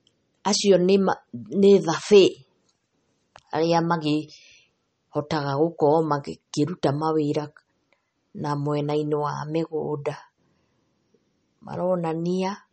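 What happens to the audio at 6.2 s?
At 6.2 s the speech carries the same MP3 compression heard across the whole clip. Nothing sounds above 8.4 kHz, and weak frequency lines flicker between frames, giving a plainly audible watery swirl with smeared attacks, likely from a starved, low-bitrate encode.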